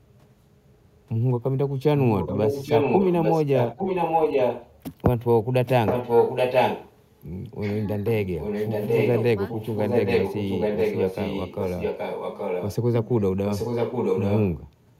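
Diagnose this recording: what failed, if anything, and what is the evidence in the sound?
Echo leak at 2.16–4.83 s, 5.65–6.98 s, 8.24–9.25 s, 9.46–12.76 s and 13.46–14.48 s, in the call-processing stage. A copy of the speech returns 822 ms after the original, at a steady delay. It is roughly as loud as the speech, louder around 5.65–6.98 s and quieter in the last two stretches. The likely cause is a far-end loudspeaker whose echo canceller let its microphone pickup pass back into the call.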